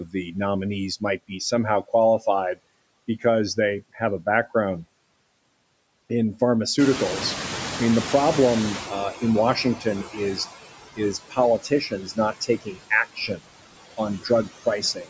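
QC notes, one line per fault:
Throughout: noise suppressor artifacts. The suppressor pulls down the bands it judges to be steady noise by about 20 dB, one frame at a time. Between phrases the background sinks, then surges back under the talker as speech opens those bands. This sits on top of a call-microphone band that stops at 8 kHz.
6.78–10.48 s: noise suppressor catching up. The room noise jumps by about 15 dB at roughly 7 s, but the suppressor's noise estimate still reflects the quieter room. The new noise therefore passes through with less reduction at first, then fades as the estimate adapts over about 3.7 s toward a reduction near 15 dB. This leaves the background sitting about 11 dB below the speech.
0.05–0.35 s, 9.56–9.86 s, 10.96–11.38 s, 11.59–13.41 s, 14.19–15.09 s: speech cut by the noise suppressor. Parts of the speech are mistaken for noise and dragged down with the background, by about 11 to 19 dB at worst. 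The first cut comes just before "nominees might." Most of the later ones are heavier, reaching about 19 dB and close to three-quarters of a second of affected sound across 11.59–13.41 s. Soft consonants and word tails come out swallowed or faint.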